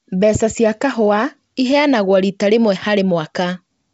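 Nothing goes wrong anywhere in this bit of speech, which comes over G.722 wideband telephone coding at 64 kbit/s with any trace of the codec faint at most.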